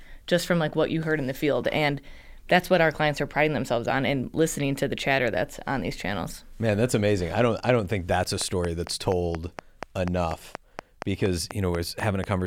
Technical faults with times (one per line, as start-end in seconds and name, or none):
8.41-12.25 train of clicks